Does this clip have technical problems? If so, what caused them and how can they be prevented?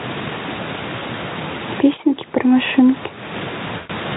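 Yes. Gain pumping runs through the whole clip, with a swing of around 20 dB. The likely cause is input gain set far too high, with a fast limiter or compressor repeatedly pulling it back down. Lowering the microphone gain so the limiter rarely engages prevents this.

VoIP packet loss concealed by the speech codec appears at 0.99 to 1.03 s, a 20 ms gap, and at 3.77 to 3.91 s, a longer loss of about 120 ms. In each gap the decoder kept extending the last pitch and filter shape at falling gain, so the speech smears into a buzzy tone or coloured noise that fades. Because each frame depends on the previous one, the speech stays weak briefly after the gap. Using a more reliable network path, a larger jitter buffer, or forward error correction prevents this.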